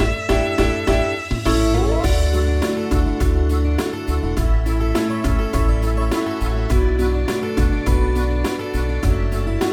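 One channel runs roughly 3 ms behind the other, and the mismatched pair has been summed to mono, producing channel delay (comb filtering) across the whole clip. Content common to both channels cancels at evenly spaced frequencies from about 150 Hz upward, leaving the audio hollow and phasey throughout.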